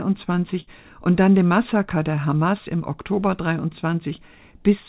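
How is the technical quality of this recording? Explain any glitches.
The audio carries two packet-loss glitches over a call-quality channel, with nothing above 4 kHz, which fits a G.711 A-law call path.

From 0.60 to 0.69 s there is a burst of packet loss. About 60 ms never arrived, so the receiver extended and faded the last sound. On a spectrogram this shows as a smeared, fading band, then an abrupt restart.

From 1.48 to 1.52 s there is a short concealed packet loss. About 20 ms was missing and was filled from the preceding sound, leaving a brief smear or wobble and a tiny blurred patch on the waveform.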